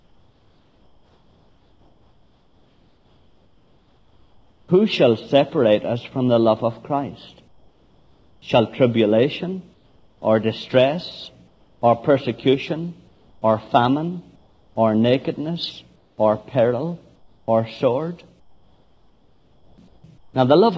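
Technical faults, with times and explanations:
0.00–4.68 s, 7.48–8.42 s, and gaps within 9.74–20.34 s: comfort noise in place of the background. Real room tone becomes flat hiss, about 5–6 dB quieter at first, likely discontinuous transmission during pauses.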